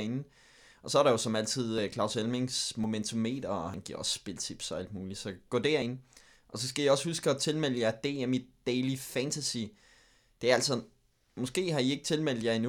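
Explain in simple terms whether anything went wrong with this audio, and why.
Yes, the speech skips forward four times, at 1.78, 2.84, 3.74 and 5.82 seconds. Each is a jump in the sound, where a sliver of audio, roughly 20 to 40 milliseconds, just vanishes. That's likely a dropped buffer (overrun): the recording software fell behind and lost a chunk.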